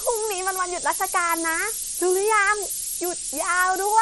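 From start to finish, a steady, thin hiss, nearly as loud as the speech and rising strongly toward the treble, comes from low bit depth with noise shaping: about 3 bits, with the rounding error pushed upward in frequency. Throughout, the speech also sounds watery and swirly, with smeared attacks and nothing above 11.8 kHz, likely from MP3 compression at a low bitrate, which fits roughly 48 kbps.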